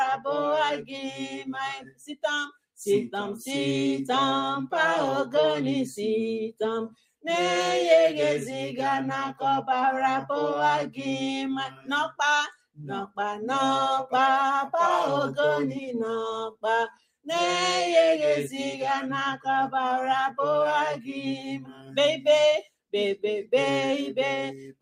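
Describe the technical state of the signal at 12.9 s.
At 12.9 s you're right in the middle of a sound cut by the noise suppressor, running from 12.55 to 13.18 s. It misread this stretch as noise and pulled it down hard, by about 21 dB at the deepest point, so the sustained part sinks and its decay gets clipped short for a bit under half a second in total.

Underneath that, a noise suppressor applied to music or sounds is working on the whole clip, treating steady material and tails as noise. That gives a constant gain wobble of roughly 5 dB, so held sounds pump and thin out while attacks punch through.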